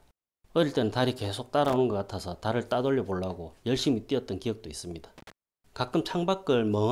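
Loose connector crackle bursts at 1.65 to 1.76 s and 5.18 to 5.32 s. A worn contact chops the signal, producing irregular scratchy crackling.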